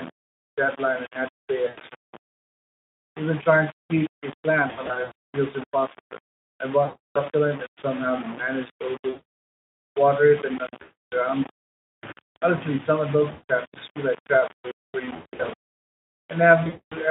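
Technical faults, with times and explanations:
Throughout: low bit depth without dither. The speech carries a grainy, rasping distortion that rises and falls with the sound itself, with the error sitting only about 15 dB below the speech. Quiet word endings and pauses sputter between a couple of levels or snap to silence. This points to coarse rounding to likely around 5 bits with no dither. Unlike steady hiss or codec hoarseness, the grit is tied to the signal and vanishes in true silence.
1.67–1.80 s, 4.67–5.12 s (after "trying to keep a", before "feels impossible I"), 6.83–7.22 s, 9.09–9.23 s, 10.81–11.01 s, 13.31–13.43 s (just before "tasks just feel like"), 15.05–15.53 s (after "like traps waiting for"), 16.63–16.95 s: VoIP packet loss concealed by the speech codec. Lost stretches run from 100 to 400 ms, some scattered in short bursts. The decoder fills each gap by repeating its last pitch and spectral shape, so the voice smears into a buzzy, fading tone rather than cutting to silence. 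It then stays weak and distorted briefly after audio resumes. The effect is heard through the Speex telephone-band line, which shows only light coding damage of its own.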